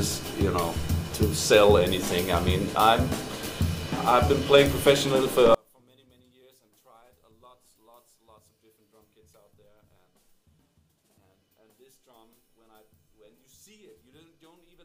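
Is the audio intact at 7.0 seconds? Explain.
No. At 7.0 s you're inside a stretch running from about 5.55 s to the end where the sound drops by about 38 dB and becomes faint. The likely cause is one channel inverted: with one side's polarity flipped, everything the two channels share cancels when they're summed to mono, and what's left is just the small difference between them. That's why nearly all of the sound, background included, nearly vanishes.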